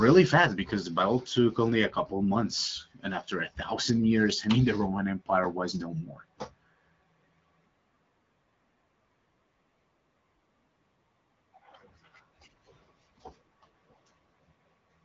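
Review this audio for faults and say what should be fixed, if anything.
Nothing here needs fixing; the speech is simply carried over an AMR wideband (HD Voice) link at 12.65 kbit/s, so the top end stops at about 7.5 kHz, which is just how that path is built.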